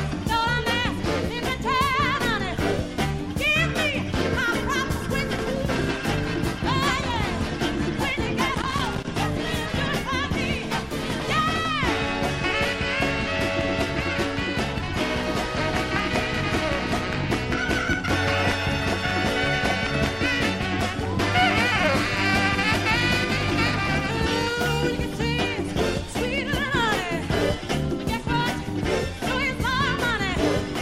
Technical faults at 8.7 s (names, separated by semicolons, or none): loose connector crackle